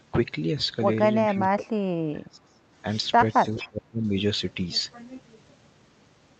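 Echo leak, from 1.27 to 1.43 s and again from 3.31 to 3.68 s: a faint copy of the speech returns about 429 ms late, about 20 dB and then about 15 dB below the talker. This is likely a loudspeaker's echo canceller letting residual pickup through.

Speech suppressed in double talk, from 1.31 to 2.61 s and from 3.42 to 4.11 s: while both sides overlap, the talker's speech sinks by up to around 30 dB and then 25 dB, chopping in and out. This is likely the canceller muting everything it cannot separate from echo.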